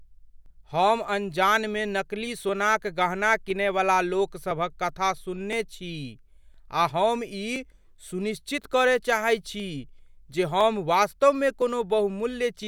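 From 0.46 s to 12.63 s the speech carries periodic USB or driver dropouts, about fifteen of them at a steady interval of 1.01 s. At each one, something stalls the USB bus or audio driver and roughly 10 ms of audio is skipped outright, with no silence inserted, so the waveform jumps across the gap. The discontinuity is heard as a tick or pop, evenly spaced, that shows up only where the speech has signal.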